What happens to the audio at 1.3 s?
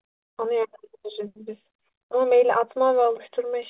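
Nothing goes wrong at 1.3 s: the speech carries straight through that moment with no dropout, glitch or distortion, only the steady narrowband sound of the call path, which holds everything below 4 kHz.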